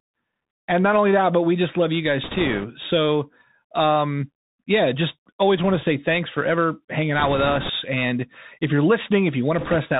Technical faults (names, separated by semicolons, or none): Bluetooth CVSD headset codec; bit errors on a Bluetooth voice link